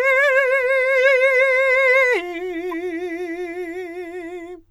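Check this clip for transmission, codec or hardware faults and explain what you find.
One transmission fault is audible in the music: a corrupt frame decoded from 2.70 to 2.74 s. Flipped bits in a couple of compressed frames were decoded anyway, so misread gains and codes put energy at wrong frequencies for about 40 ms. It sounds like a brief chirping burst peaking near -20 dBFS.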